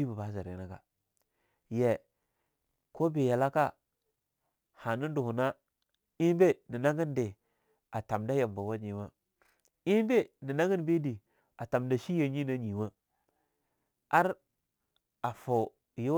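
Right through the clip there's sample clock jitter: the converter's clock wobbles by several microseconds, so samples land slightly off time. That leaves a grainy hiss sitting roughly 35 dB under the speech, rougher on loud, bright syllables and gone in the pauses.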